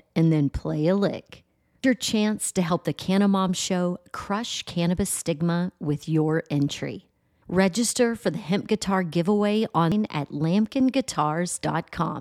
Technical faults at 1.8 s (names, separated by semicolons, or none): damaged data in a compressed stream